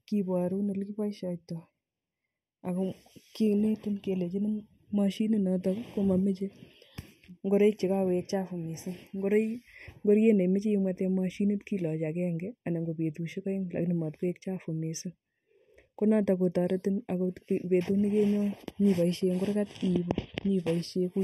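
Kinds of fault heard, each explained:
Channel delay (comb filtering): one channel trails the other by well under a millisecond, so the mono sum notches out frequencies from around 1.5 kHz up, leaving the speech hollow and phasey throughout.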